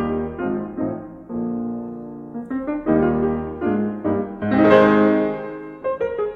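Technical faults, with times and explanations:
No technical faults can be heard anywhere in this music clip.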